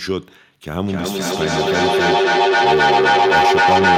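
From 0.84 s to the end, a feedback howl builds as the microphone-to-loudspeaker loop gains level each trip. Unlike an echo, whose repeats fade, these grow, narrowing to a tone around 700 Hz that pulses roughly every 300 ms and peaks about 8 dB above the speech.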